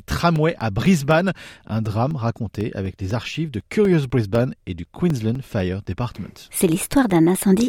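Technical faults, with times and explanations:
0.11 to 7.60 s: periodic USB or driver dropouts. A regular tick repeats every 0.25 s across this span, about thirty times in all. Each tick is a tiny gap of about 2 ms where the audio drops to silence. Something blocks the audio path at a fixed interval, and a small piece of signal never arrives. The sudden cut and restart make a click. The even spacing gives the steady, clock-like rhythm.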